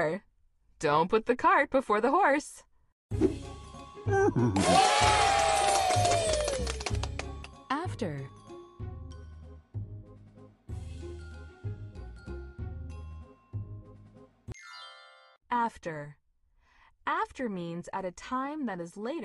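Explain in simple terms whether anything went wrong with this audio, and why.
At 7.43 s the sound abruptly gets quieter and stays that way to the end, likely because one channel drops out of the stereo pair.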